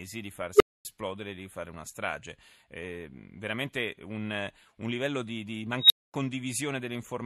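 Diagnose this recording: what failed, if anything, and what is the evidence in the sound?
An unstable filter in the processing stage failed twice in this speech. At 0.56 s a tone of roughly 400 Hz swells in about 45 ms, clips, and then the sound drops out for 250 ms before "di fare una strage". After "un livello di di", at 5.78 s, a tone of around 4 kHz builds over 117 ms and is followed by 240 ms of silence. A recursive filter with bad coefficients fed back on itself until its numbers overflowed. It stayed silent until it reset.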